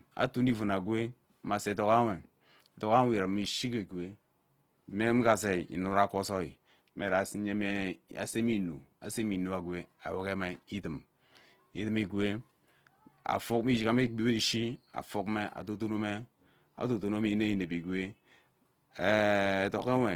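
Throughout the speech, tones sound grainy, rough and noisy, with plainly audible damage. This is likely Opus compression in its music mode, starved at a low bitrate near 16 kbps.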